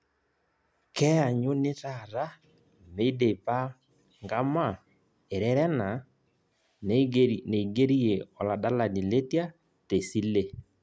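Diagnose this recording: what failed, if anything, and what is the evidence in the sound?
No fault can be heard.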